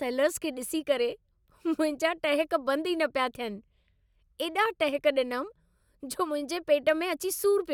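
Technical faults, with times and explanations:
Nothing in this speech recording stood out as a technical problem on listening.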